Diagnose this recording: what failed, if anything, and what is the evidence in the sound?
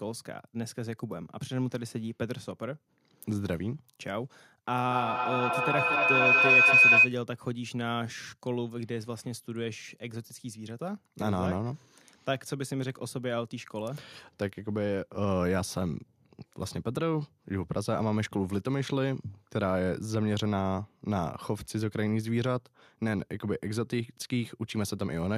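A feedback howl breaks out from 4.81 s to 7.16 s, a failure in the acoustic loop of the call rather than in wiring or codec. Two devices in one room share the call, so each pass through microphone and loudspeaker adds gain. Instead of decaying like ordinary echo, the repeats, spaced around a fifth of a second, swell and narrow to a tone near 3 kHz, peaking about 10 dB above the speech.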